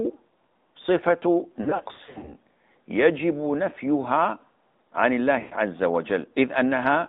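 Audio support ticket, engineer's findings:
Throughout: buzzy, boxy, band-limited sound, nothing above about 3.7 kHz or below 200 Hz; AMR narrowband mobile codec, pitch-pulse vocal tract model at a mid bitrate, consistent with the 10.2 kbps mode.

1.62–2.34 s: repeated brief dips and warbles. 5.40–5.56 s: sound smears, fades out, returns rough. Lost AMR speech frames; decoder repeats last good parameters with falling gain, runs up to 60 ms, then 120 ms.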